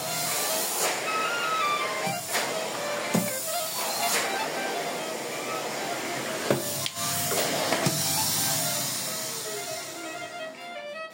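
Nothing goes wrong anywhere in these everyday sounds; there's no technical fault to point to at any moment.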